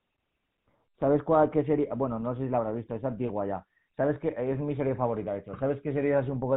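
From start to finish the speech carries the signature of the GSM full-rate codec, and the damage is plainly audible: a buzzy, gravelly roughness, consistent with the 13 kbps full-rate mode. The codec reduces the voice to a vocal-tract filter excited by sparse, evenly spaced pulses, discarding most of the excitation detail, so the grain sits on every voiced stretch. A spectrogram shows a hard ceiling at 4 kHz with smeared, pulse-striped harmonics beneath.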